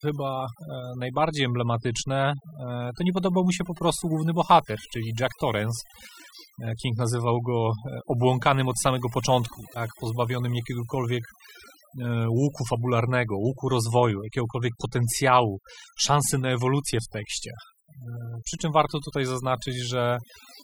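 From start to finish, the recording carries overdone noise removal: a noise reduction stage was pushed far too hard on a noisy source. Wherever individual frequency bands sit close to its noise estimate, it drives them down or shuts them off, and the softer parts of the speech fall below that line along with the noise. The gaps between phrases drop to near silence dotted with twinkling specks.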